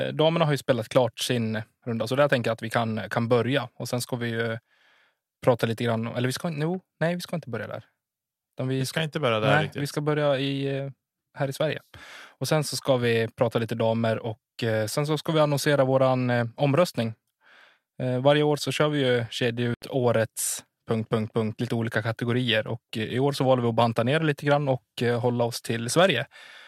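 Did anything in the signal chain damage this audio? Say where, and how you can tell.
Yes. At 19.74 s the speech cuts out completely for about 80 ms and picks up again at 19.82 s further along, as though it had carried on underneath the gap. Nothing is smeared or repeated, which points to the playback stage, most likely a Bluetooth dropout: packets on the wireless link to the headphones arrived too late and were discarded, leaving silence. The length fits a short burst of several lost packets.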